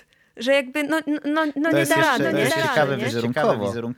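A doubled audio track begins at 1.66 s, just after "jakby no no no", and runs to the end of the clip. A second full-band copy of the speech enters abruptly and trails the original by roughly 0.7 s, sitting a few decibels below it. It carries no decay or room colouring, so it sounds like a flat, out-of-step duplicate rather than an echo. The likely cause is the same signal being captured again through a slower path.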